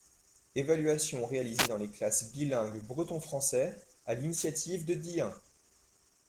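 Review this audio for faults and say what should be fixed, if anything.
Opus voice compression throughout: a low bitrate, sounding like about 16 kbps in hybrid mode, codes the speech excitation coarsely, leaving it plainly hoarse and slightly robotic, though the band stays full. Prevent it by encoding at a higher bitrate or keeping an uncompressed master.

Wireless microphone noise hits at 1.55–1.69 s, just before "dans les classes bilingues", and at 4.35–4.48 s: the radio link fades, so receiver noise rises into brief swishes of static over the speech. Prevent them with diversity receivers, a clear line of sight and shorter transmitter-to-receiver distance.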